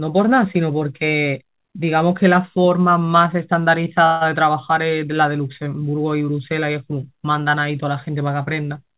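Call audio freeze at 4.06 s: a 147 ms fading buzz bridges a stall, likely from delayed packets emptying the jitter buffer. The sound then resumes with nothing lost.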